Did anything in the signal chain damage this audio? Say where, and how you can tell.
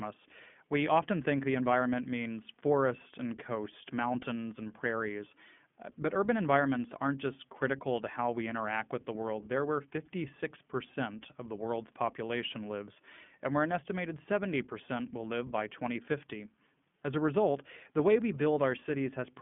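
Yes. Throughout the speech there is iLBC codec damage, a codec-stage fault. The band is confined to a telephone line, roughly 150 Hz to 3.4 kHz, so a spectrogram shows a hard ceiling at 3.4 kHz with nothing above it. The voice has a plainly audible rough, synthetic grain. Each short frame's excitation is coded independently, which fits 20 ms frames at about 15.2 kbps.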